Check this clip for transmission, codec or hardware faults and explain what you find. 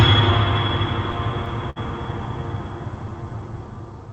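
Three timing faults in this music clip, all from the receiving end trying to keep pace with the sender. They're heard over the call path, which sounds Opus-coded with the top end stopping around 8 kHz.

Clock drift between sender and receiver runs through the whole clip. The sender's clock seems slow by roughly 3 percent, so the jitter buffer keeps draining instead of sitting at a steady level. The receiver has to pad things out by repeating small pieces. You get small, irregular timing hiccups scattered across the music instead of a clean, steady flow.

There's a short stall from a late packet at 1.70 to 1.78 s. A packet didn't turn up on time, the buffer emptied, and the receiver held the last sound for about 59 ms until the data arrived. Then it picked up exactly where it left off, so nothing is actually lost. What you hear is a note that hangs a touch too long, with a faint buzzy or dipped quality, and everything after it is shifted late by about 59 ms.

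From 2.78 to 4.10 s there are repeated timing corrections. This is the drift being handled actively: the receiver keeps repeating tiny slices to stretch the audio, so this stretch plays at about 96 percent speed and gains roughly 50 ms overall. Every edit pushes the same way but they're unevenly spaced. Each one is small.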